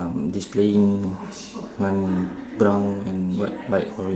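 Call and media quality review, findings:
Nothing stood out on listening to this speech clip.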